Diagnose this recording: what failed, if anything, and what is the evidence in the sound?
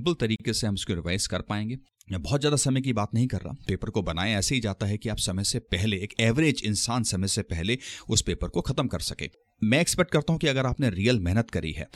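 The failure sits at the codec stage: there's a gap at a join of encoded pieces right near the start. At 0.36 s the speech drops out into silence for about 36 ms, running to roughly 0.40 s, then picks up exactly where it left off. The edges are smeared by the codec. That's two separately encoded chunks butted together untrimmed, so one run's end-of-frame padding and the next run's start-up delay both survive as dead air.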